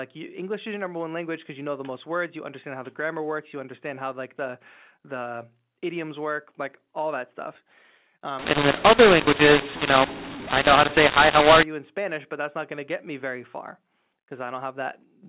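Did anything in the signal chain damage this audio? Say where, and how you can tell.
Yes. From 8.39 to 11.63 s the speech turns harsh and gritty, and the pauses in that stretch fill with hiss instead of falling silent. This is a mu-law and A-law mix-up at the codec stage. The audio was encoded as mu-law but decoded as A-law. The two logarithmic curves disagree, so sample levels come back wrong. Quiet samples are lifted well above silence. Outside that window the G.711 telephone sound is intact and stays band-limited below 4 kHz.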